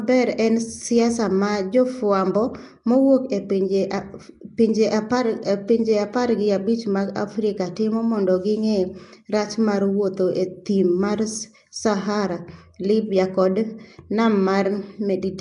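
Throughout the speech, the signal appears to have passed through a low-rate transform codec, most likely Nellymoser Asao, the old Flash microphone codec, at a rate consistent with about 44 kbps. Working in blocks of 256 samples on a fixed two bits per sample, it leaves weaker bands without bits and fills them with noise. The result is plainly audible: a rough, hissy halo around the voice, a smeared, underwater quality, and nothing above 10.6 kHz.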